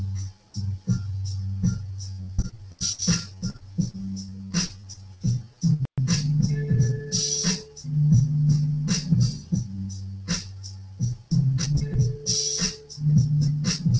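Brief ticks and small smears pepper the audio from 2.04 to 3.36 s and again from 3.59 to 4.57 s: scattered short gaps, each roughly 10 to 15 ms, where lost or late packets were patched by stretching the preceding sound forward, all heard over the 8 kHz bandwidth of the G.722 call path.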